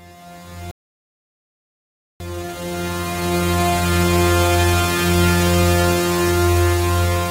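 The player likely ran short of data or had its output thread blocked at 0.71 s, causing a playback stall in this recording of sounds: the audio cuts to silence in mid-flow for about 1.5 s, then resumes at 2.20 s. From 2.20 s to 5.20 s the player works off its backlog with time-compressed catch-up, cutting out small pieces and cross-fading across the gaps, so the sound runs 1.25 times fast at unchanged pitch.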